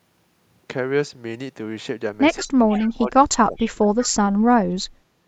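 From 2.36 to 4.56 s the speech level drops and recovers unevenly, losing about 25 dB at its deepest across roughly two seconds. This is speech suppressed in double talk: both ends were likely talking at once, and the echo canceller turned this talker down along with the echo it was trying to remove. The voice sounds ducked and patchy. On a waveform the envelope caves in across this span. A spectrogram shows the harmonics thinning and fading.

Inside that span, three brief bursts of echo leak appear at 2.75 to 2.87 s, 3.58 to 3.65 s and 4.02 to 4.08 s. Each is a copy of the speech delayed by 172 ms, likely picked up from a loudspeaker that the far end's canceller did not fully clear. The first sits about 15 dB below the speech and the other two about 25 dB below, so they come through as faint ghost syllables. A spectrogram shows them as weak, short smears that repeat the harmonic pattern of the speech 172 ms later.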